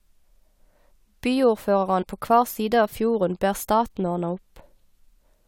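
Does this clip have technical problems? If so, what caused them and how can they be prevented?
Yes. A short glitch at 2.01 to 2.03 s marks damaged data in a compressed stream: corrupted bytes made the decoder misread frames and lose sync. Checksummed transfer and error-resilient containers prevent it.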